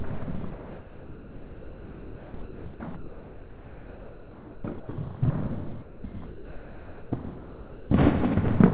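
From 0.52 to 4.88 s the sound turns choppy. Most of that stretch, about 3.9 s in total, is replaced by a synthetic hiss. This is likely sound chopped by the voice detector, which kept switching the sender off and filling the gaps with comfort noise. It happens again from 5.82 to 7.9 s, where about 1.6 s is filled the same way. Nothing in the clip reaches above 4 kHz, which fits a G.711 mu-law call path.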